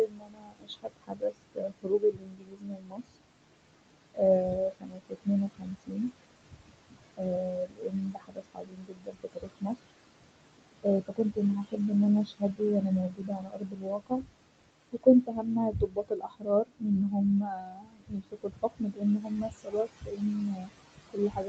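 Throughout the speech, noise suppressor artifacts are present. The room noise, which sits about 15 dB below the voice, is pushed down by about 22 dB in the gaps and rises again under each phrase. It tracks the speech rather than staying steady as plain background hiss would.

Speech cut by the noise suppressor also occurs at 0.06–4.2 s, affecting roughly 4 s. It happens again at 4.57–11.78 s, about 5 s in total, ending just before "ان انا". A brief cut of about 0.2 s follows at 12.26–12.61 s, right after "ان انا". The last runs from 13.1 s to the end. In each case, quiet consonants and word endings are turned down by about 22 dB along with the noise, so they sound swallowed or faint. Unlike a dropout, the louder parts of the voice stay intact.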